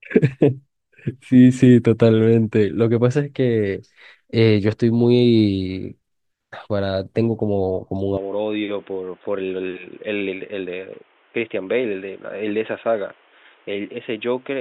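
At about 8.17 s the speech suddenly goes dull and boxy, with nothing above roughly 3.7 kHz, and it stays that way to the end. There's no gap at the change. The level drops by something like 10 dB, and a new noise floor comes in around 30 dB under the speech. That's most likely the input switched to a poorer device, such as a headset's call profile or a cheaper mic, with its own narrow band, tone and background noise.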